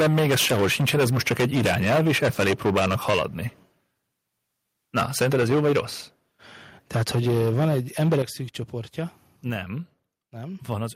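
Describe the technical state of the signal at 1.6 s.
Microphone overload covers 1.6 s, within a span from 0.0 to 3.23 s. The speech peaks are flattened against the converter's limit, with roughly a third of the waveform clipped, giving a harsh, crackling edge. The likely cause is input gain set about 15 dB too high.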